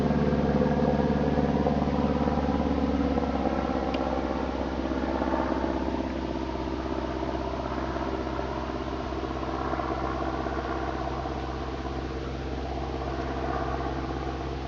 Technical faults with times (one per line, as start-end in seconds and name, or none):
none